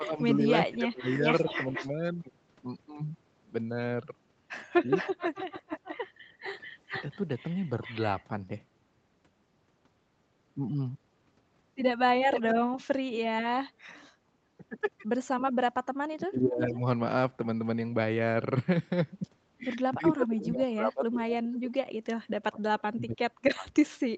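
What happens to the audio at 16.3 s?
At 16.3 s you're in the middle of a suppression dip from 16.08 to 16.85 s. The speech drops hard, by around 30 dB at its deepest, and stays turned down for most of that stretch. That's likely speech suppressed in double talk: the echo canceller couldn't tell the talker from loudspeaker echo and turned both down.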